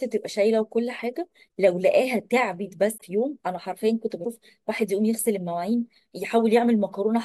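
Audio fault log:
2.97–3.01 s and 4.24–4.27 s, broken MP3 bit reservoir: the speech jumps ahead with a brief garbled glitch, about 50 ms and then 30 ms, spanning one or two 24 ms frames. The likely cause is dropped frames: the next frame fetched its borrowed reservoir data from another frame's bytes and decoded wrongly.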